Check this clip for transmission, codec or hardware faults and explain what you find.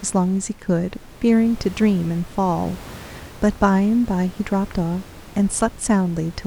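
I find no faults in this clip.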